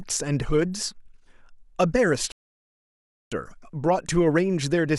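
At 2.32 s the speech cuts to silence until 3.32 s, then resumes exactly where it stopped: a rebuffering stall, the player starved of downloaded audio, adding about one second.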